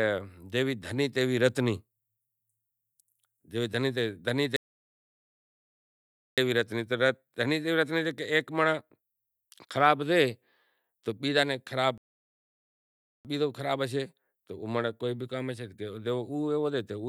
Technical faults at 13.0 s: playback stall

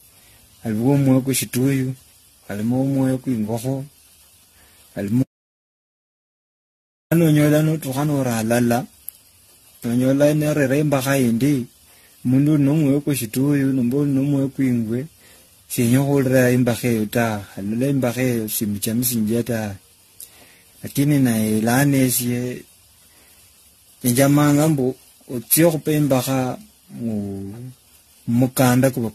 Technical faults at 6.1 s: generation loss; audio dropout to silence

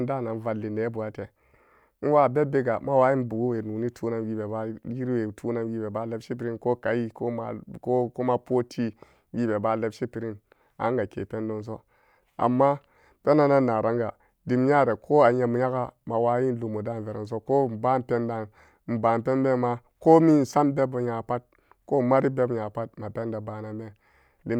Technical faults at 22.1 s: none

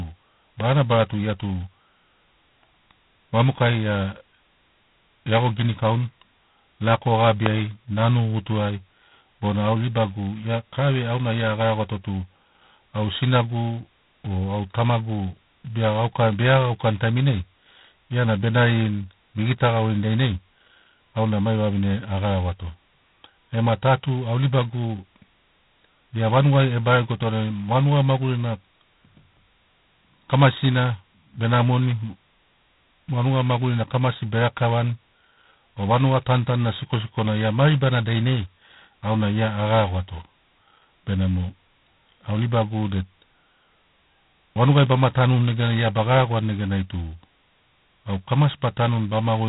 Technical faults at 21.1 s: G.726 ADPCM

